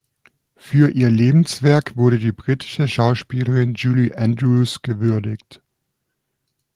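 Nothing goes wrong anywhere in this bit of speech, so there's no technical fault to point to at any moment.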